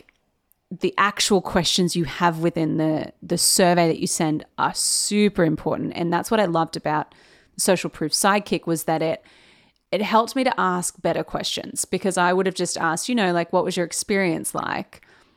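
At 14.57 to 14.59 s, a brief glitch cuts into the speech for about 20 ms. This is damaged data in a compressed stream: corrupted bytes made the decoder misread those frames and lose sync until it locked onto the next valid frame header.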